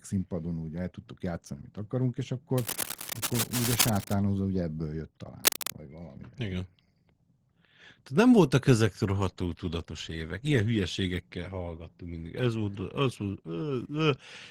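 From 2.57 to 4.14 s, just after "játszani amit akarunk és", there's cable scratch noise, rough rustling a bit below the speech, likely a worn connector being moved. It returns from 5.44 to 5.72 s, after "ugye ebből jött", about as loud as the speech.

From 9.2 s, right after "voltak ezek", a call bitrate drop makes the speech go rough and watery to the end. The sound fits the encoder falling from about 32 to 18 kbps, and it sits at its worst for about 4.5 s.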